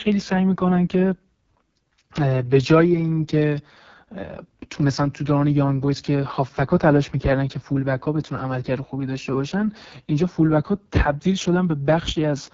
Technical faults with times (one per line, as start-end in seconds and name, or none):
0.00-12.53 AMR wideband (HD Voice) codec